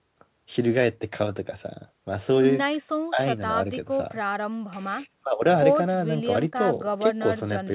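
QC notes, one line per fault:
No faults heard anywhere in this speech recording.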